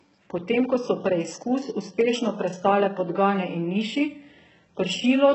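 From start to finish, the speech carries heavy coding damage. Nothing reaches above 8 kHz. The treble that remains sounds synthetic rather than natural. Its harmonics do not line up with the lower band, so s sounds come out gritty and lispy. This points to a very low bitrate, around 8 kbps. The likely cause is HE-AAC compression, where spectral band replication copies lower bands upward and shapes them only coarsely.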